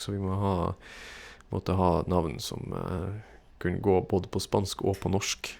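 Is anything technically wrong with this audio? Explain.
No, nothing technically wrong can be heard here.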